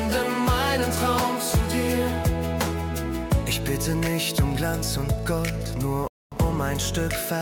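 At 6.08 s the sound drops to silence and picks up exactly where it stopped at 6.32 s: a rebuffering stall, adding about 0.24 s while playback waited for data.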